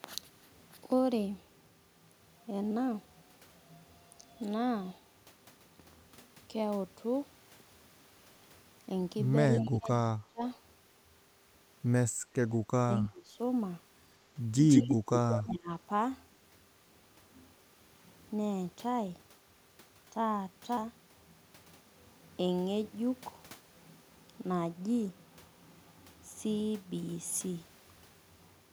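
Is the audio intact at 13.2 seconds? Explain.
No. From 12.84 to 13.39 s, about half a second, the speech is suppressed in double talk: its level sinks by roughly 25 dB at the deepest point. The likely cause is an echo canceller that could not distinguish this talker from the returning loudspeaker echo while both ends spoke, so it attenuated everything. Unlike a packet-loss dropout, which usually cuts to abrupt silence, this is a gated dip in level that recovers as the overlap ends.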